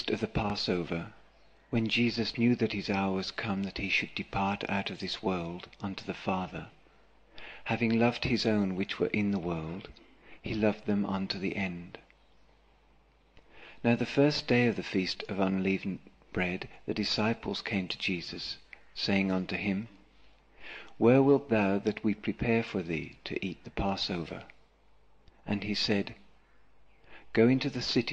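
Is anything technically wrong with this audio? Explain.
Yes, there is a single loud pop from about 0.50 to 0.52 s. A sudden voltage step or pulse, likely from a plug being seated, a switch, a static discharge or a driver glitch, was added on top of the signal, and the circuitry after it shaped that pulse into a brief burst. It is heard as one sharp pop, peaking roughly 10 dB above the surrounding sound, while the audio continues uninterrupted beneath it.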